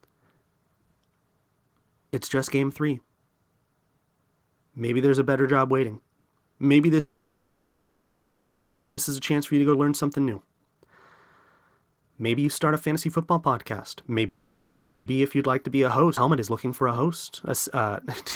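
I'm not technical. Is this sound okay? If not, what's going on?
No. There are three problems.

Call audio freeze: The audio likely stopped arriving for a moment, so the receiving end kept the last sound going as a fading buzz or hiss. This happens from 6.99 to 8.99 s and from 14.28 to 15.08 s. Afterwards the speech picks up where it left off, with nothing lost.

Jitter buffer speed-up: Audio had piled up waiting to play, so the system trimmed tiny slices out to catch up. The speech sounds hurried but keeps its normal pitch. This happens at 9.19 to 10.88 s (113% speed), 11.78 to 13.36 s (129%), 14.08 to 14.24 s (166%), 15.36 to 17.06 s (115%) and 17.51 to 18.05 s (120%).

Skip ahead: A chunk of audio was thrown away while later audio was already waiting. Playback jumps straight forward at 16.16 to 16.19 s, and roughly a second of speech is simply missing, with the two sides joined almost directly.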